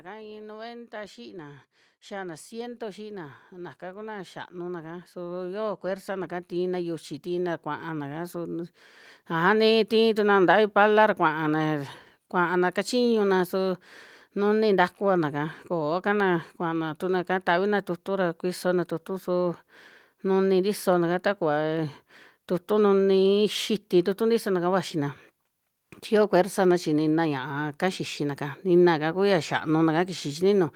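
From 0.05 s to 9.93 s, automatic gain rising lifts the level by about 20 dB, settling just before "tii tukuna". The control judged the input too quiet and kept raising gain, so the speech and background noise swell together, unlike a speaker moving closer.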